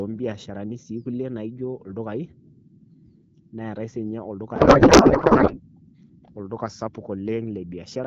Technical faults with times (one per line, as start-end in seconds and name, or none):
4.55-5.63 codec payload misread